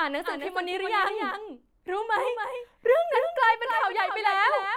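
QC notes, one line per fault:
Throughout, doubled audio track: the speech is heard twice, with a second full-band copy trailing the original by about a third of a second and sitting some 5 dB lower, so every syllable gets a distinct, clean repeat rather than a smeared tail. The copy carries no decay or room colour and holds a fixed offset, which points away from acoustic echo and toward a likely second capture of the same signal through a slower path, or two misaligned copies left in an edit.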